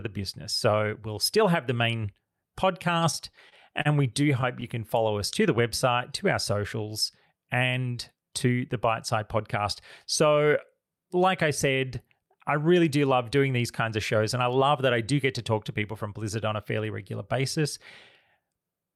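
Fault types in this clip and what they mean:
Repeated stalls (stutter): Between 3.11 and 3.87 s, just before "we do", packets arrived late and the jitter buffer ran dry four times. Each time the receiver stretched the last sound to fill the hole. The fills add up to about 76 ms, with the longest under 35 ms. Together they cover about a tenth of that stretch. Nothing is lost. The speech just catches and drags in small hitches.
Jitter buffer speed-up: From 15.38 to 16.08 s, right after "that I do get", the buffer held more audio than its target. The receiver trimmed short pitch-period pieces again and again to shed the excess. Roughly 40 ms was removed in all. The speech runs about 4% fast at unchanged pitch. The pacing tightens briefly.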